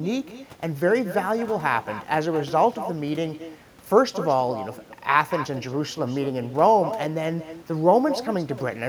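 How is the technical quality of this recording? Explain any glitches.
The recording is compromised by one fault that runs through the whole clip. Echo with no canceller, present from start to finish: the far end is playing the call over a loudspeaker, its microphone picks that playback up, and nothing subtracts it before sending it back. Every phrase of speech therefore returns around a fifth of a second later, about 12 dB quieter, as a thin shadow trailing just behind the original.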